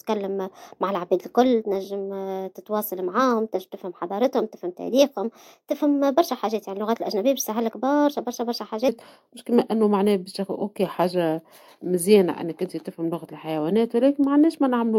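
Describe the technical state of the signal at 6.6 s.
At 6.6 s the speech sits inside a section at the wrong speed, running from 0.0 to 8.89 s. It plays 1.21 times too fast, likely from being fitted to the wrong clock. Pitch rises about three semitones with it. The voice sounds high and hurried.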